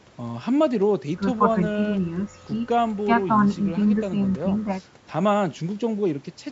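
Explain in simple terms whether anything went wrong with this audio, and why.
Nothing went wrong with this speech recording. It passed through the usual microphone processing of a call, which trims away the deepest bass and carries nothing above 8 kHz, so it has the slightly narrow, phone-like tone that is normal for a call.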